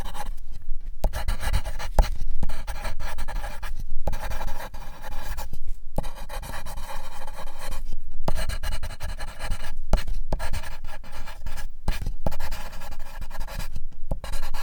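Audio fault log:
Nothing stood out on listening to this recording.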